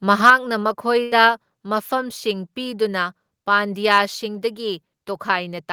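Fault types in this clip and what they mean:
microphone overload: Around 0.26 to 0.32 s the loudest peaks flatten into a harsh crackle, likely from input driven about 4 dB past the converter limit.
microphone volume stepped down: At 0.3 s, right on that distorted peak, the level drops abruptly by about 4 dB, likely the call software cutting input gain in one step.
burst of packet loss: From 1.03 to 1.14 s the sound is held and fades for 80 ms, then resumes at "ꯃꯐꯝꯁꯤꯡ ꯄꯤꯗꯨꯅ" with 80 ms missing.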